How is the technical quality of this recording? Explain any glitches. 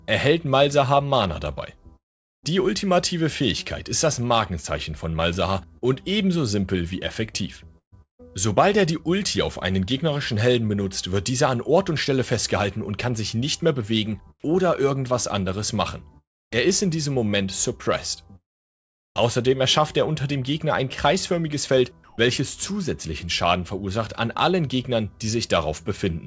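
The recording has clear transmission faults: one long gap, two stretches of choppy sound, and one brief patch of synthetic background. Nothing is heard above 8 kHz, which fits a wideband call codec such as G.722.

Long network dropout, 1.96 to 2.50 s. The sound cuts out for about half a second. The cause is likely a stretch of lost packets. The receiver stretches the last sound into a fading buzz, then leaves silence. About 0.48 s of audio is simply gone, so the sound resumes further on with a jump.

Sound chopped by the voice detector, 5.78 to 8.25 s and 16.18 to 19.20 s. The sender's detector likely switched on and off repeatedly here, dropping softer parts of the sound. About 0.35 s is replaced in the first stretch and about 1.1 s in the second. Each replacement is filled with comfort noise. The result is choppy.

Comfort noise in place of the background, 22.04 to 22.18 s. For 140 ms the real background is swapped for smooth, featureless noise. 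This is likely discontinuous transmission pausing while nothing is being sent. The fill is about 5 dB quieter than the true background. That background sits about 30 dB below the loud parts.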